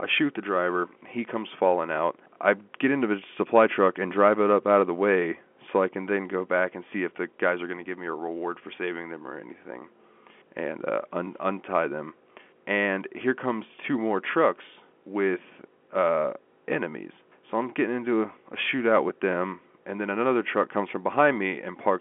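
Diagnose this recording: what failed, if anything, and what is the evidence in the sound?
Nothing here has failed: the speech comes through an ordinary G.711 mu-law telephone path at 64 kbps, with the expected line band of roughly 200 Hz to 3.4 kHz, nothing above about 3.7 kHz, and at most faint coding damage.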